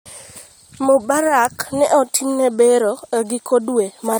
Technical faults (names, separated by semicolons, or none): none